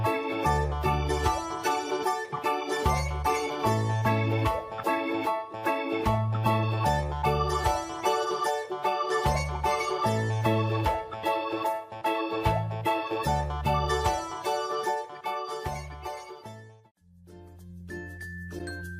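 From 8.62 to 10.33 s, one channel lags about a sample before mono summing: channel delay (comb filtering), notching near 20 kHz and dulling the top.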